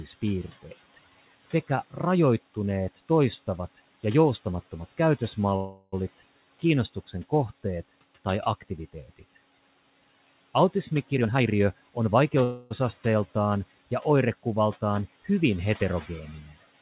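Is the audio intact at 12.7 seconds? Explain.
No, a call audio freeze runs from 12.44 to 12.72 s: the last sound stretches into a fading buzz, likely a starved jitter buffer, then resumes where it stopped, with nothing skipped.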